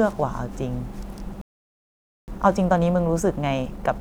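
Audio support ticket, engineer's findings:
Playback stall, 1.41 to 2.28 s: the player most likely ran dry of buffered data or its output thread was blocked, so nothing reached the device. The speech cuts off mid-flow and the output goes silent for about 0.87 s before it resumes.

Time-compressed catch-up, 2.28 s to end of clip: the player drains its backlog by excising short segments and cross-fading the joins. The speech runs about 1.1 times fast at unchanged pitch, hurried.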